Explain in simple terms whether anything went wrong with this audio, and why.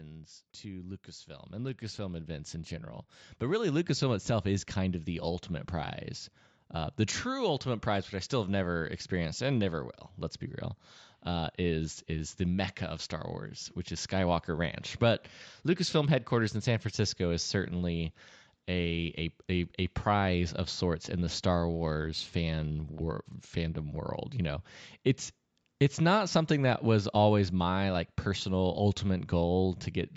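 Two things went wrong in this speech recording.

From 0.61 s to about 6.0 s you can hear automatic gain rising. The recorder decided the input was too quiet and kept turning its own volume up, so the voice and the background noise get louder together over several seconds. A sudden jump in level would point to something else; here the loudness creeps up smoothly, and the room noise climbs right along with the voice.

Three times the sound turns dull and gritty: 1.54 to 3.22 s, 15.69 to 16.95 s (just before "is certainly a"), and 21.73 to 23.77 s. This is a Bluetooth SBC bit pool drop. The wireless link got crowded, so the phone squeezed the audio into far fewer bits to keep it flowing. The crisp top end vanishes and a rough, grainy texture appears, then clears as the link recovers. Unlike a dropout, the sound never stops; it only gets coarser and muffled for a second or two.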